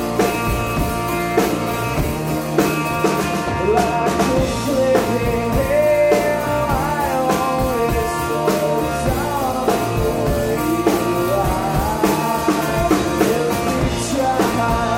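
No technical faults are audible.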